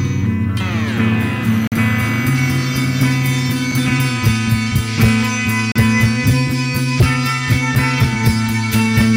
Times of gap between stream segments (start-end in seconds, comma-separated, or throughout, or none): 1.67-1.72, 3.72, 5.72-5.76, 7.75